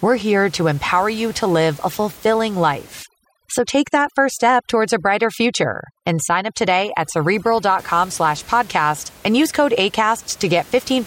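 From 3.03 to 7.79 s, just after "live a fulfilling" and up to "slash podcast and use", overdone noise removal sets in. The suppressor pushes individual frequency bands down to nothing wherever they sit near its noise estimate, taking quiet parts of the speech with them. The room noise, about 25 dB under the speech elsewhere, collapses into near silence with twinkling specks. A spectrogram shows black gaps between harmonics and scattered isolated flecks.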